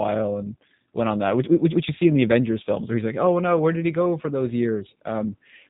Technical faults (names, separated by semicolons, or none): G.729 codec